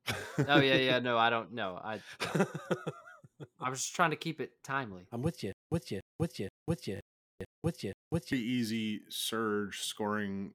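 From 5.52 to 8.33 s, a stutter with silent gaps: a 288 ms fragment repeats six times, each followed by 193 ms of silence, likely a stalled stream replaying its last buffer. Right after "it timely I'm with", from 6.97 to 7.41 s, robotic sound from repeated short buffers gives a rigid 50 Hz buzz, likely from looping a 20 ms buffer over most of the audio.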